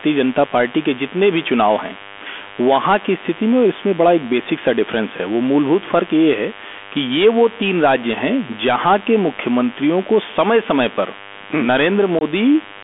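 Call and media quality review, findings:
DECT cordless phone buzz, present throughout. Steady, thin 100 Hz buzz with a dense harmonic series, sitting roughly 20 dB under the speech. Probable component: analogue audio front end near a DECT handset or base. Mechanism: the radio bursts every 10 ms, the circuit rectifies them, and the result is an audio-rate envelope at the burst rate. Audible in pauses as well as under the speech.

Bluetooth CVSD headset codec, full length. Narrowband sound. Line band about 250 Hz to 3.5 kHz, nothing above. Damage plainly audible. Granular hiss under the speech. Scratchy s sounds. Loud high-frequency passages break up. Probable component: headset link, which fits a 64 kbit/s CVSD link. Mechanism: one-bit up/down delta coding with an adaptive step. Fast rises outrun the step and distort. Step noise becomes the hiss.

Unconcealed Bluetooth headset packet loss at 12.19 to 12.23 s. 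A 22.5 ms hole with abrupt edges. Level dips briefly on recovery. Probable component: headset-to-phone radio link. Mechanism: a run of short voice packets went missing. The gap length points to several consecutive packets of about 3 ms each. They were replaced by silence or an idle pattern, with no concealment. The CVSD decoder restarts from a small step, which gives the quiet recovery.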